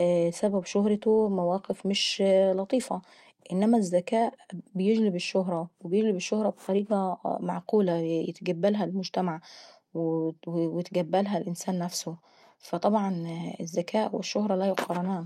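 No technical faults found in the speech recording; nothing to report.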